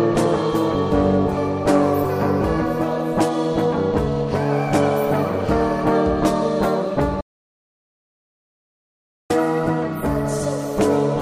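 At 7.21 s the sound cuts to dead silence, an audio dropout to silence, until 9.30 s. About 2.09 s is lost, likely from a disconnected input.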